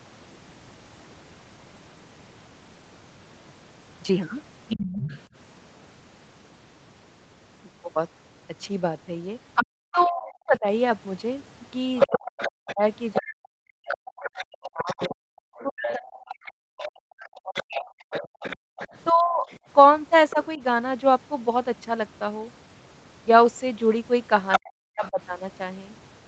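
A second voice runs underneath the speech in three places: briefly from 4.69 to 5.2 s, then from 9.55 to 20.46 s at roughly 10 dB below the main talker, and again from 24.52 to 25.11 s, where it is about as loud as the talker. This is other side's voice leaking through, likely because the far end was playing on a loudspeaker and the echo canceller left part of it in the microphone signal. Over much the same stretches the main speech keeps dipping and breaking up. Between 9.91 and 20.61 s it drops in pieces, by as much as around 40 dB, adding up to about five seconds of lost or thinned speech. It happens again from 24.59 to 25.2 s for about half a second. This is speech suppressed in double talk: with both sides talking at once, the echo canceller likely could not separate the local talker from the echo and pulled everything down together. A separate, shorter fault falls between 18.59 and 18.78 s, where the room sound itself drops out by about 40 dB for roughly 0.2 s and then comes back. 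That is background gated by the echo canceller, which clamped the microphone hard while the loudspeaker was active. The top end stops at 8 kHz throughout, consistent with a wideband call codec such as Opus at a low bitrate.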